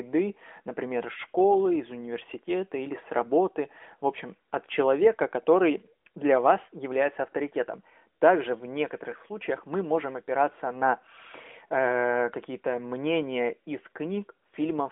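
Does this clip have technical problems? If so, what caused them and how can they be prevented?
No, this speech carries no technical faults; it has passed through an AMR narrowband mobile codec at 12.2 kbps, so it occupies a telephone band of roughly 250 Hz to 3.5 kHz with nothing above 3.6 kHz, which is the normal result of that path.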